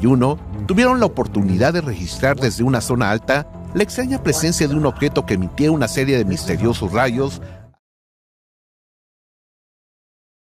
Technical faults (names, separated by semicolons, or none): none